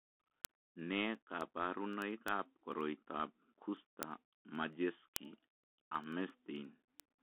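A short speech clip carried over a Bluetooth CVSD headset codec. The sound is narrowband telephone audio, roughly 250 Hz to 3.4 kHz, with nothing above about 3.8 kHz. CVSD sends one bit per sample, saying only up or down, and adapts its step size. That fits a 64 kbps link. The damage is plainly audible. Loud, bright sounds outrun the step and distort, sibilants turn scratchy, and a granular hiss sits under the speech. Word clock ticks also run from 0.19 s to 7.17 s. They come about every tenth of a second, roughly 70 in all. The receiving device runs on its own clock, not locked to the sender's, and is off by around 200 ppm. Each time the two clocks slip past each other, a sample is dropped or repeated. That leaves a sharp tick of uneven strength at a steady rate.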